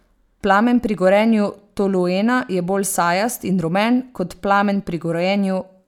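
Speech recording, no technical faults detected anywhere in the clip.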